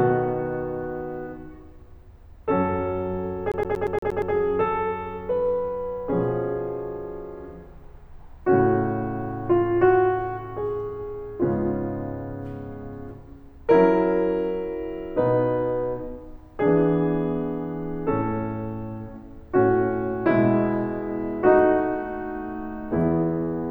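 A music clip with a CD stuck on one turn from 3.52 to 4.34 s. A short fragment of about 117 ms repeats seven times, giving a fast, regular stutter with a brief mute at each jump. The evenness of the repeats points to a scratch or defect that knocks the laser back one track at the same point on each rotation, so the player keeps rereading the same slice of audio until it breaks free.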